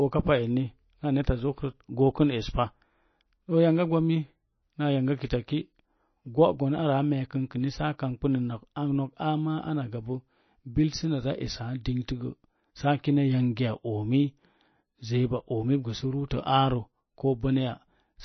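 Speech runs throughout with a watery, swirling texture, smeared consonant attacks and no content above 6 kHz, plainly audible damage that likely comes from MP3 compression at a low bitrate, around 26 kbps, where the encoder cuts the treble and lets weak frequency lines flicker between frames. At 16.29 s a sharp onset is preceded by a brief hiss lasting about 17 ms. This pre-echo occurs because the codec spreads quantisation noise sized for the loud attack across its whole block, including the quiet moment just before it.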